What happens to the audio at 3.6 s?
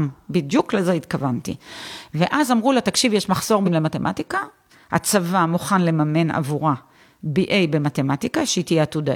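From 3.63 to 3.69 s, a span of about 60 ms, the speech is broken by damaged data in the compressed stream. Corrupted bytes there make the decoder misread those frames and lose sync until it finds the next valid frame header, and that gap comes out as a chirp, squawk, click or short hole. A network dropout would leave silence or a smoothed-over gap.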